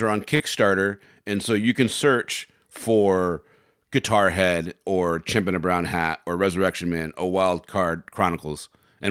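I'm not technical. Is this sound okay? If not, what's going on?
No. Near the start, right after "are on", about 40 milliseconds of the call went missing, from 0.35 to 0.42 seconds. This is short concealed packet loss. The receiver patched the hole by stretching the sound just before it, so you hear a quick smear.

Three more brief moments, at 0.40, 1.34 and 5.38 seconds (the last just before "in a"), are a lost packet rebuilt from error correction. Each one covers 20 milliseconds. It was replayed from a rough backup copy, so it sounds grainy.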